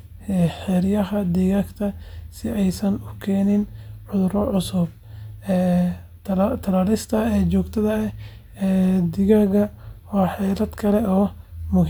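No technical faults are audible.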